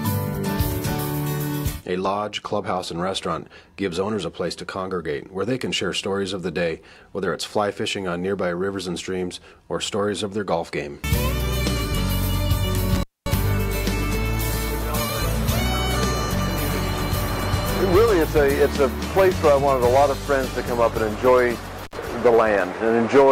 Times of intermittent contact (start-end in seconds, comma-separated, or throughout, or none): 12.95-13.34, 21.84-21.96